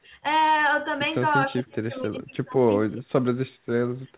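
From 1.48 to 3.27 s the speech dips and breaks into fragments, losing up to about 30 dB for roughly one and a half seconds in total. This is likely speech suppressed in double talk: the echo canceller turned the talker down along with the far-end echo. On a waveform the envelope shows ragged, deep troughs. On a spectrogram the energy below 4 kHz, the usual ceiling of this G.711 mu-law call path, fades into patchy gaps.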